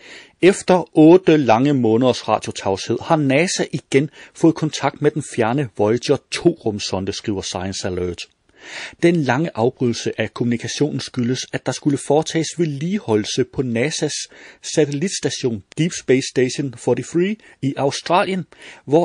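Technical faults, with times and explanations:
Throughout, MP3 compression: the audio was likely squeezed by an MP3 encoder starved of bits, at a rate that fits roughly 40 kbps. With so little to spend, the encoder drops the upper treble and zeroes weaker frequency lines, which flicker on and off from frame to frame. The damage is plainly audible: the speech sounds watery and swirly, sibilants turn metallic and chirpy, and consonant attacks lose their edge.
1.23–1.27, 4.71, 8.99–9.02 and 18.04–18.06, pre-echo: the encoder appears to have stayed in long transform blocks, around 52 ms, instead of switching to short ones at sharp onsets. The quantisation noise meant for each loud attack therefore spreads back into the quiet just before it, rising about 12 to 15 dB for 16 to 33 ms. This is heard as a brief hiss ahead of "lange måneders radiotavshed har", between "igen fået" and "med den fjerne", and at the two later onsets, each of which sounds softened.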